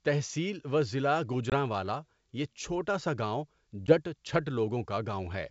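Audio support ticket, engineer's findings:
Packet loss on an ADPCM call, 1.50 s (just after "تحصیل و ضلع", 20 ms hole, a couple of packets) and 3.87 s (10 ms, about one packet). Hard-edged silence, then slightly distorted restart while the decoder's predictor and step size resynchronise. Spectrogram: full-band vertical gap.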